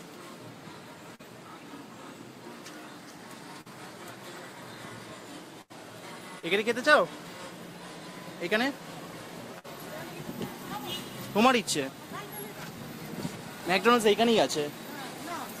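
At 1.15 s, 3.61 s and 6.40 s there is short concealed packet loss. Each time about 40 ms of the stream failed to reach the decoder in time, and the receiver bridged the hole by extending the preceding sound for roughly 30 to 45 ms before merging back into the real signal. Each one is heard as a brief smear or wobble in the flow.

At 5.62 to 5.72 s and again around 9.59 to 9.66 s the dropouts are longer: a burst of packet loss. Several consecutive packets, about 80 ms and then 60 ms of audio, were lost or arrived too late to play. The receiver held the last sound and let it fade across roughly 80 ms and 50 ms respectively. This produces a sustained buzz or dying hiss, after which the audio picks up further along with that stretch gone.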